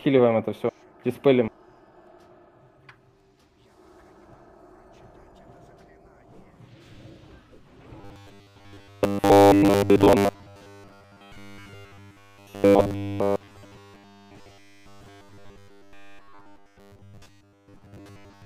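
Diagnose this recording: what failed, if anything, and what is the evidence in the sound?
From about 8.01 s to the end, the sound collapses into robotic sound from repeated short buffers: a stiff, metallic buzz pinned at 100 Hz that still loosely tracks the original contour. That fixed pitch points to a 10 ms chunk being looped. The culprit is likely the driver or buffer stage starving, where fresh audio arrives too rarely, so the same short slice gets replayed for most of the time while real material is skipped.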